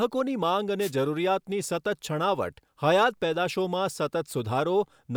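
From 0.79 to 0.92 s, a wireless microphone noise hit cuts across the speech as a brief swish of static. The FM radio link fades when reflected signals cancel, letting receiver hiss surge up. Unlike a digital dropout, noise rises over the sound rather than cutting it to silence.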